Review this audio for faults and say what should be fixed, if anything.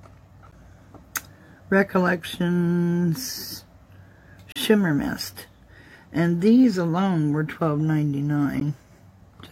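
Gaps between stream segments cut hard-edged silences into the sound at 0.51 s, 4.52 to 4.56 s, and 8.60 s. They last 13, 38 and 14 ms. They recur every 4 s, where segment timestamps leave holes. Make each segment start exactly where the previous one ends.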